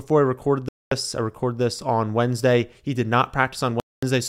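A Bluetooth stall, likely from interference delaying packets until the headphone buffer emptied, cuts the speech to silence from 0.69 to 0.92 s and again from 3.80 to 4.03 s. Each gap lasts about 0.23 s before the sound resumes.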